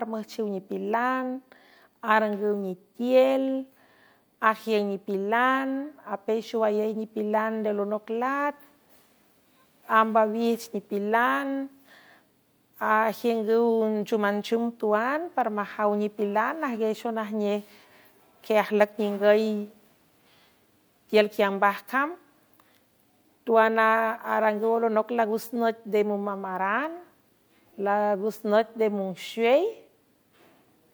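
No technical faults can be heard anywhere in this recording.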